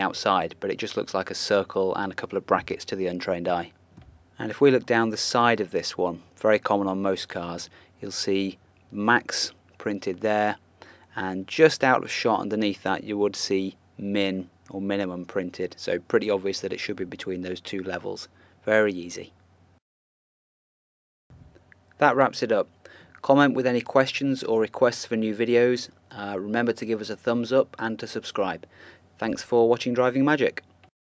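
Nothing stood out on listening; the audio shows only the expected effects of call microphone processing, with the lowest bass trimmed and nothing above 8 kHz.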